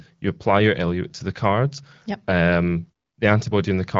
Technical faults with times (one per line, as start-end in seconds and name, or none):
none